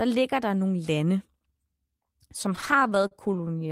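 From 2.49 s to 3.70 s, packets reached the receiver late or more slowly than they were played out, so the jitter buffer kept running dry and the clip falls into repeated stalls (stutter). Well over a dozen times in that stretch, the receiver stretched the last bit of speech to cover the wait, the longest hold about 41 ms, adding about 204 ms in all, about 17% of the span. Nothing is lost, but the speech drags and catches repeatedly.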